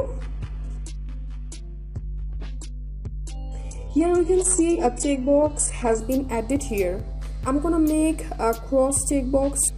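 For the first 6.0 s the sound is dull and smeared, with nothing above 11.1 kHz and a synthetic top end. At 6.0 s it brightens abruptly with no gap. This is an adaptive stream starting at a low bitrate, which fits HE-AAC near 12 kbit/s stepping up to AAC-LC around 96 kbit/s.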